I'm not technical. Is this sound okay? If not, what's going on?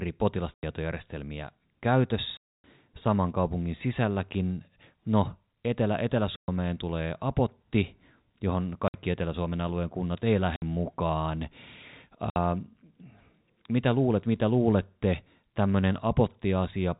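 No. The speech has packet loss filled with silence. Bits of sound went missing in transit, and silence was played instead. You hear short holes with hard edges at 0.54–0.63, 2.37–2.64 (just before "saman kaupungin sisälläkin"), 6.36–6.48, 8.88–8.94, 10.56–10.62 (right after "alueen kunnat ei") and 12.30–12.36 seconds. The gaps are 60, 90, 120 or 270 milliseconds, all multiples of 30, which points to chunks of about 30 ms each.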